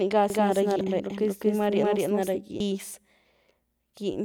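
Speech, carrying a doubled audio track from 0.30 s to 2.36 s: a second, equally loud copy trails by roughly 200 ms, starting and stopping abruptly, likely from a second capture path. Damaged data in the compressed stream produces brief blips at 0.81 s and 2.60 s, where the decoder lost frame sync.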